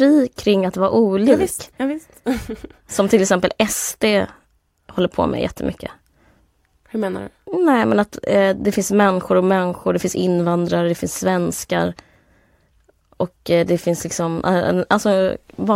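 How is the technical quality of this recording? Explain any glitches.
Nothing stood out as a technical problem on listening, so there are no glitches to explain in this speech recording.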